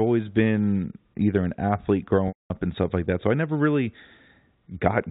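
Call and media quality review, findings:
Packet loss with pitch repetition, 2.28–2.50 s, between "been either an athlete" and "and stuff like that". 220 ms gap, which fits a burst of about eleven 20 ms packets. Receiver concealment repeats the last pitch period as a brief buzzy hold, fades it to silence within about 50 ms, then cross-fades back into the speech. The G.711 mu-law path caps the band at 4 kHz throughout.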